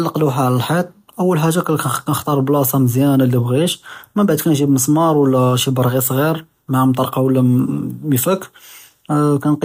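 No technical faults can be heard anywhere in the recording, and the speech signal stays intact from its opening to its close.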